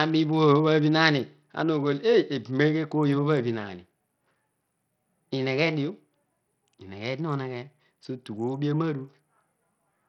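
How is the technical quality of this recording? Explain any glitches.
Not great. The speech carries heavy coding damage from start to finish. It sounds like Bluetooth SBC compression is the likely cause, and the grit points to a starved link running around 64 kbps. SBC splits the signal into a handful of wide frequency bands and hands out bits with no hearing model. When the budget is this tight, the top bands get almost nothing, so the treble keeps flickering in and out. The lower bands are coarsely quantised, which leaves a gritty, aliased roughness riding on the speech throughout.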